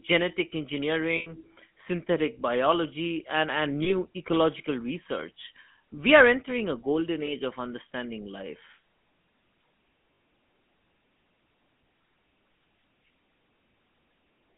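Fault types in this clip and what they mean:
GSM full-rate codec: The whole clip carries the coarse, buzzy grit of the original GSM phone codec, which rebuilds speech from a vocal-tract model fed by sparse, regularly spaced pulses instead of the real waveform. The damage is plainly audible here, a gravelly roughness on every voiced stretch, and the sound fits the 13 kbps full-rate mode. The band is squeezed to roughly 150 Hz to 3.4 kHz, so there's no low body and no air on top.
Lost GSM frames: At four spots the decoder lost frames and filled the gap by replaying the last good frame's settings, which you hear as a brief rough, metallic ringing hold. The longest is from 1.16 to 1.44 s, about 100 ms of concealed audio, which fits five missing frames. There's a 60 ms patch at 10.14 to 10.2 s, and two short 20 ms blips at 3.84 s and 7.26 s.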